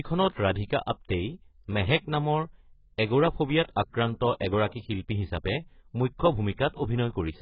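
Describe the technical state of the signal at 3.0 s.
At 3.0 s the speech is sitting right in the middle of some heavy AAC compression damage, and it's there across the whole clip, not just at that moment. Nothing comes through above 5.5 kHz, so it sounds dull and muffled, with a smeary, warbling, fizzy texture on held sounds and sibilants. That's most likely a low-bitrate AAC-LC encode, around 12 kbps, where the encoder drops the top end and coarsely quantises whatever's left.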